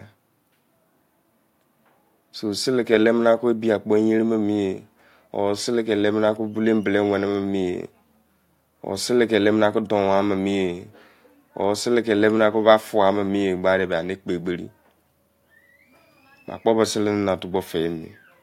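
Nothing in this recording stands out as a technical fault; it simply runs along without any glitch, dropout or break to point to.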